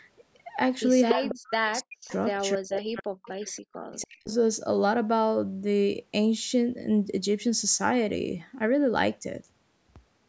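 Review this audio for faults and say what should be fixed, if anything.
Echo leak appears at 1.09–1.31, 2.08–2.13, 2.73–2.79 and 3.25–3.59 s. A copy of the speech returns 288 ms late, first about as loud as the speech, later around 5 to 25 dB quieter. The likely cause is a loudspeaker echo canceller that let residual echo through.

Speech suppressed in double talk occurs at 1.14–2.12, 2.34–3.27 and 3.87–4.31 s. The speech dips by as much as about 40 dB while the other side talks. This is likely an echo canceller muting both talkers during overlap.

Both faults can be prevented by using a headset, or by improving the far-end echo canceller's adaptation and double-talk handling.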